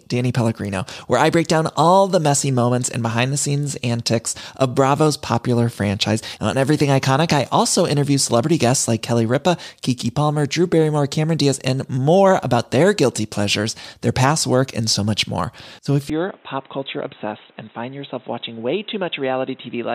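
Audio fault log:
16.10–19.95 s, input switched to a poorer device: the sound abruptly turns dull and boxy with no gap, dropping about 5 dB, with a new noise floor roughly 30 dB down. On a spectrogram, everything above 3.9 kHz vanishes at 16.10 s, the cut-off typical of a headset call profile, so the likely cause is a change of input.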